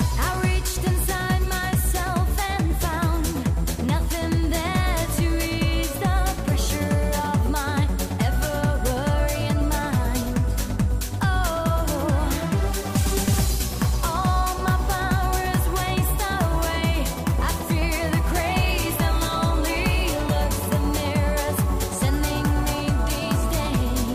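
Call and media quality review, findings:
No faults found in this recording. Nothing to flag for follow-up.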